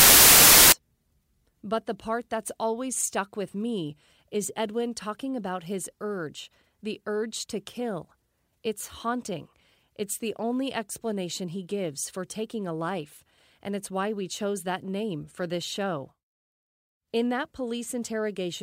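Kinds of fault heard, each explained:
Samples built from the wrong bytes: For the first 0.72 s, each sample is assembled from misaligned or swapped bytes. The rapidly varying low bits then dominate the values. The speech comes with loud, harsh broadband noise.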